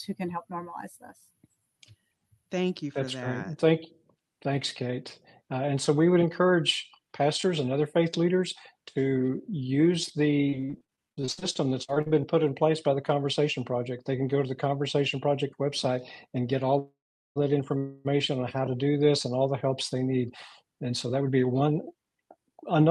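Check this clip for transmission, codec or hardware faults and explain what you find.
Three kinds of transmission fault are audible, all on the receive side of a call path whose codec band stops near 12 kHz, consistent with Opus at a moderate bitrate.

Repeated packet loss (robotic sound), 10.49 to 12.15 s: nearly twenty short holes, the longest 55 ms, each patched by stretching the previous sound. About a third of that stretch is synthetic fill, so it turns choppy, with fragments missing.

Call audio freeze, 16.79 to 17.38 s and 17.78 to 18.07 s: the sound hangs as a fading buzz, the first one dropping to silence for about 0.41 s. It then resumes where it stopped, with nothing lost, only delay added. The likely cause is delayed packets draining the jitter buffer.

Jitter buffer speed-up, 19.9 to 22.8 s: the buffer held surplus audio, so the receiver trimmed short pitch-period slices repeatedly, removing roughly a third of a second. 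Playback runs at 109% speed with unchanged pitch, sounding hurried.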